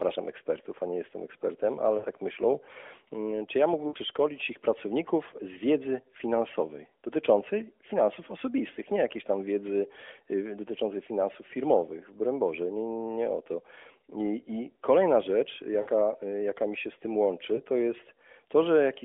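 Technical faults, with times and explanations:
1.98–2.06 s, 3.88–3.97 s (between "czy ja" and "ich pracowników z wiedzy"), 15.82–15.88 s (after "I I kolejna rzecz") and 17.56–17.60 s (after "mi się z tym"): lost AMR speech frames. These are dropouts of 60, 60, 40 and 20 ms, which fits three, three, two and one 20 ms frames. The decoder stretches the last good sound at falling level, so each gap is a short smeared dip, and the voice comes back a little weak or rough. All of this sits inside the 250 Hz to 3.5 kHz AMR-NB phone band.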